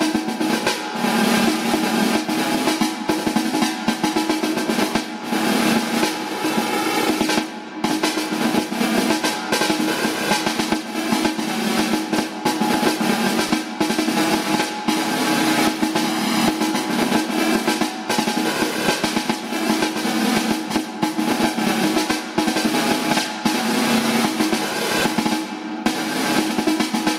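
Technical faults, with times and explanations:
Throughout, gain pumping: the level gets pulled down under every loud sound, with the level swinging by something like 15 dB. That's likely the gain set far too hot and a fast limiter clamping down, so everything sounds squashed.
13.49 s and 24.99 s, lost LE Audio frames: each is a 10 ms dropout where the LC3 decoder patched the hole by reusing the previous spectrum with random signs. Any tone there smears briefly into noise, then the sound picks up again.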